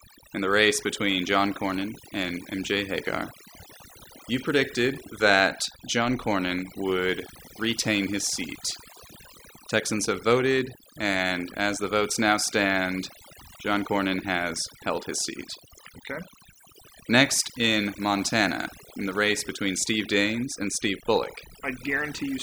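Speech clip with overdone noise removal throughout: the denoiser cut frequency bands near its noise estimate, leaving the background as twinkling, warbling specks and stripping quieter speech detail.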